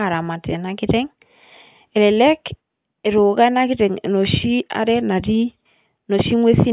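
No technical faults detected.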